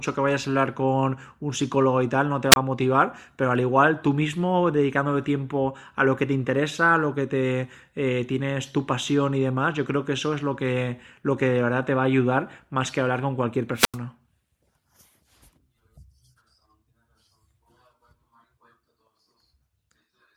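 Wireless microphone squelch dropouts occur at 2.51 to 2.56 s and again at 13.75 to 13.98 s in this speech. Each time the FM radio link fades and the receiver's squelch mutes the output. There is a brief rise of hiss, then the speech is cut to near silence before it returns. The first mute lasts about 25 ms. The second is longer, about 88 ms.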